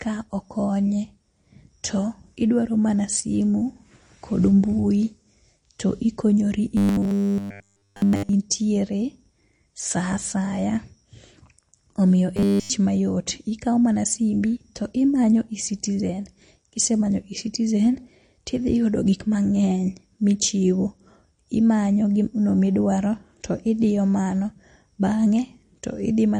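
The whole recording shows signs of MP3 compression, likely from a starved encoder running at something like 40 kbps. It cuts the treble and drops weak frequency detail frame by frame, leaving the speech dull, watery and swirly, with clearly audible smearing on consonants.

From 6.77 to 8.33 s and again from 12.37 to 12.70 s, robotic sound from repeated short buffers takes over. Audio is arriving too seldom, so the same brief chunk replays in place of the real signal, which fits a 10 ms buffer. All the sound is repeated, so the speech turns into a rigid metallic buzz fixed at 100 Hz.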